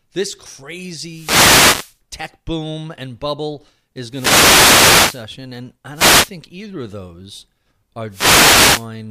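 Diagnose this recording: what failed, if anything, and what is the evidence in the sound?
The failure is in the radio link of an analogue FM wireless microphone, ahead of any digital stage. Four wireless microphone noise hits, heard as bursts of static swish over the speech, occur at 1.07–1.99 s, 4.09–5.27 s, 5.93–6.31 s and 8.09–8.89 s. Multipath reflections cancel the carrier at the receiver, so receiver noise rises through the audio until the signal recovers.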